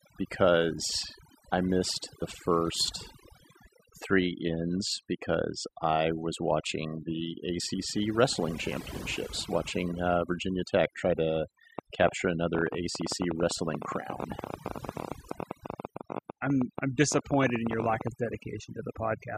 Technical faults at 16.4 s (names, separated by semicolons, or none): overdone noise removal; train of clicks